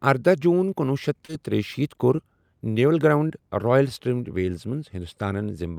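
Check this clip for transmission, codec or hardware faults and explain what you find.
Three short concealed packet losses, at 1.25–1.30 s just after "ارداہ جون کنوُہ شیٚتھ", 2.16–2.20 s and 3.28–3.32 s. Missing audio, roughly 20–40 ms each, was patched by extending the preceding sound, leaving a brief smear rather than the silent gap of a plain dropout.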